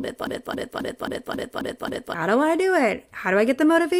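From the very start until 2.14 s, the speech is caught in a broken-record loop. A fragment of about 270 ms repeats seven times, back to back. The likely cause is a stalled player or stream resending its last fragment. Normal speech resumes with "do I do".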